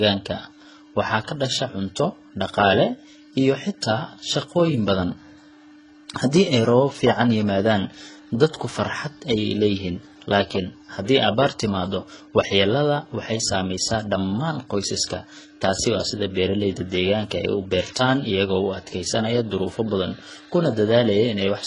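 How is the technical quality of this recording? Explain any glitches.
The quality is compromised from start to finish by layered compression damage.

Transcoding between lossy codecs runs throughout the recording. Nothing is present above 10.6 kHz, and the speech carries two kinds of artefact at once: a watery, smeared texture from very low-rate parametric coding and the swirly, slightly metallic grain of MP3. This is likely the result of speech first squeezed through HE-AAC at around 12 kbit/s and then re-encoded as MP3 at about 40 kbit/s. The MP3 stage spent its bits on the earlier damage, adding its own on top.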